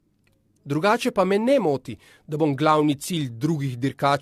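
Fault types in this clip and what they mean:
Generation loss: this speech sounds more swirly and hollow than a single lossy encode should, with smeared consonant attacks and a grainy wash running the whole way through. That's what you hear when audio is likely decoded and re-encoded several times, about four passes here, each one quantising on a shifted frame grid so the errors pile up. The character fits AAC-LC at around 64 kbit/s, and nothing survives above 14.1 kHz.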